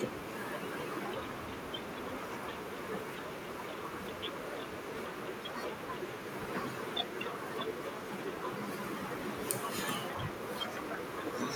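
Speech recording with no audible technical faults anywhere.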